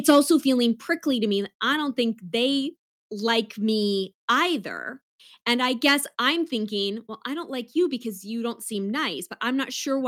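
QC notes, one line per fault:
0.09–0.19 s, microphone overload: peaks run about 3 dB past the converter's limit, likely from input gain set too high. The waveform shows flat-topped peaks, and the spectrogram shows broadband crackle smearing upward.
0.11 s, microphone volume stepped down: the level drops about 2 dB in one step, likely automatic gain reduction reacting to the distorted peak. The waveform envelope narrows abruptly, and the spectrogram darkens uniformly.
5.88–5.93 s, microphone overload: another brief clip about 3 dB over, likely the same excessive input gain. A few squared-off peaks appear on the waveform, with a vertical streak of harmonics in the spectrogram.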